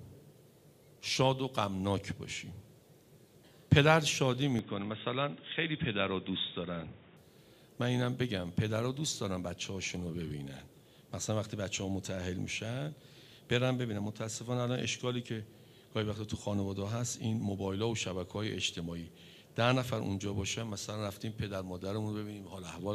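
From 4.59 s to 7.17 s the sound turns dull and boxy, with nothing above 3.8 kHz and a faint new background noise about 30 dB down, at unchanged level and with no gap. The likely cause is the input switched to a poorer device.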